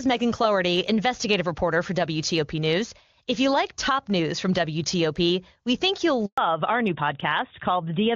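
At 6.26 s, right after "we think you'll", a handover gap opens: no speech frames arrive for 120 ms while the call switches networks. The waveform flattens to silence and the spectrogram shows a blank vertical stripe.

From 6.38 s to the end comes a fallback to narrowband. The clear HD Voice sound, which fits AMR-WB at its top rate, gives way to what points to AMR-NB at 12.2 kbit/s. The voice turns duller and rougher, and the spectrogram shows energy cut off sharply at 4 kHz.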